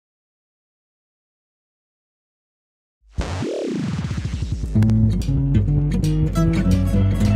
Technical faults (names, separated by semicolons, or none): loud pop